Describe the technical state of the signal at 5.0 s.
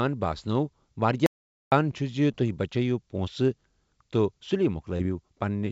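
At 5.0 s the signal carries a short concealed packet loss, spanning 4.97 to 5.01 s. About 20 ms of audio failed to arrive in time. The decoder of this G.722 call path, whose content stops at 8 kHz, extended the preceding sound to fill the gap before crossfading back. It is heard as a brief smear or wobble. A spectrogram shows a short stretch of smoothly continued or blurred content.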